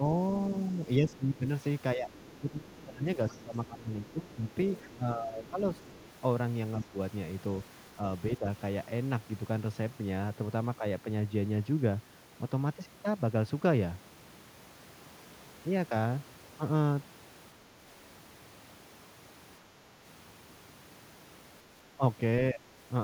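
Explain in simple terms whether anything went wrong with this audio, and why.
Between 0.68 and 5.58 s, and again at 6.85–6.98, 8.38–8.48 and 21.96–22.73 s, the speech dips and fades. This is speech suppressed in double talk, likely from an echo canceller turning everything down while both sides spoke. Faint scraps of the other side's voice leak through at 1.11–1.17 and 2.2–2.37 s, with a longer stretch from 3.29 to 6.04 s, likely because the echo canceller left some loudspeaker sound in the microphone.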